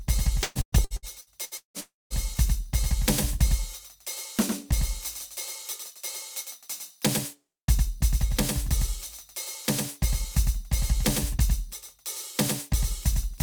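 Throughout the music, every sound has a dry, full-band twin about a tenth of a second behind and a few dB quieter. This is likely a doubled audio track, mixed in twice out of step.

From 0.43 to 1.77 s the sound turns choppy and robotic, with gaps up to 169 ms. This is repeated packet loss, with each hole patched by continuing the last sound. About half the stretch is concealed.

From 1.80 to 2.13 s a fading buzz or hiss gives way to about 0.21 s of silence before the music returns with part of it missing. This is likely a long network dropout.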